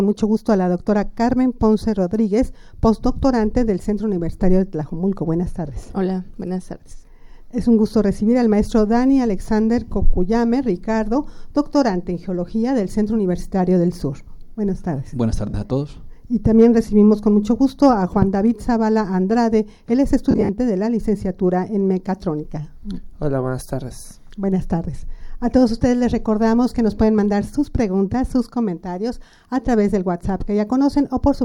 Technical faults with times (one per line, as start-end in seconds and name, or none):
15.49-15.54 lost LE Audio frames
20.31-20.49 lost LE Audio frames